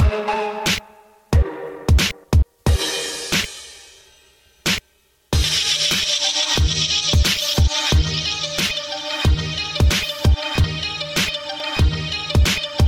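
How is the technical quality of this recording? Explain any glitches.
Three short skips break the audio, at 5.44, 10.64 and 11.6 s. Each is a sudden jump forward, losing something like 70, 70 and 40 ms. The likely cause is a dropped buffer (overrun): samples were overwritten before being collected, so the edges join directly.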